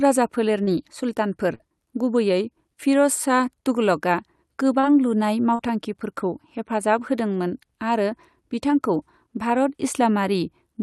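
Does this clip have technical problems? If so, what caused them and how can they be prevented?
Yes. Short concealed packet loss occurs at 0.63 to 0.70 s, just before "सुल्तानफोर गुबैयै", and again at 5.55 to 5.62 s. Each time about 40 ms of audio arrived too late or not at all. The receiver filled the hole by extending the preceding sound, so the speech smears briefly. A larger jitter buffer or forward error correction would prevent it.

A burst of packet loss follows at 1.55 to 1.63 s. Here several packets went missing together. The decoder stretched the last sound for about 48 ms and let it fade, and about 40 ms of speech is skipped. A steadier network path or packet redundancy would prevent it.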